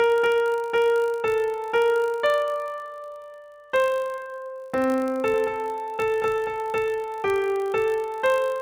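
A filter restarted on every block loses its state at each block boundary and starts from silence, so a small transient opens every block, heard throughout the audio as a 50 Hz buzz, which fits blocks of about 20 ms, rising and falling with the signal's level. From 5.34 s to 6.88 s there is a doubled audio track, likely from the same audio being captured a second time through a slower path. A full-band copy trails the original by around 200 ms at roughly 5 dB quieter, with no decay or room colour, and starts and stops abruptly.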